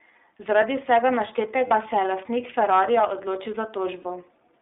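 The whole clip passed through the iLBC codec, band-limited to about 250 Hz to 3.6 kHz, leaving plainly audible rough, synthetic speech that fits its 13.33 kbps, 30 ms frame mode. From 1.68 to 1.74 s and again from 4.02 to 4.06 s, lost iLBC frames were concealed by repeating the last pitch cycle with noise, giving a brief held, buzzy vowel before the speech recovers at once.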